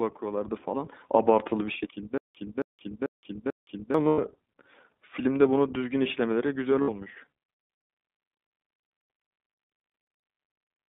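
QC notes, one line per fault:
Throughout, iLBC codec: the speech is confined to a narrow line band of roughly 200 Hz to 3.7 kHz, with nothing above. The sound is plainly rough and synthetic, which fits iLBC at about 15.2 kbps coding each 20 ms frame of excitation independently.
2.18 to 3.94 s, stutter with silent gaps: a 272 ms fragment replays four times at an even 441 ms period, each followed by about 170 ms of digital silence. The likely cause is a stalled stream replaying its last buffer on each retry, losing the audio in between.
4.08 to 4.19 s and 6.82 to 6.89 s, lost iLBC frames: gaps of 100 ms and 60 ms are filled with a held, slightly buzzy vowel-like tone. The decoder repeats the last pitch cycle with added noise during the dropout, and speech recovers at once afterwards.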